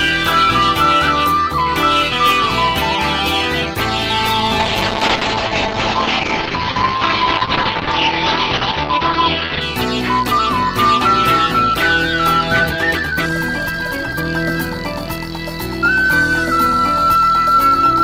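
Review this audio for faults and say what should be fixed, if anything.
A call bitrate drop runs from 4.61 to 9.67 s: the bandwidth estimate fell and the encoder coded far more coarsely, which fits a fall from about 32 to 8 kbps. Audio turns rough and muffled, top end cut near 6 kHz for about 5 s. Smoother bandwidth adaptation with a higher bitrate floor would prevent this.

A time-stretched section from 12.57 to 14.25 s plays at double pace with unchanged pitch, sounding rushed, likely from software squeezing audio to fit a length by dropping short pieces. Fitting length by trimming rather than stretching would prevent this.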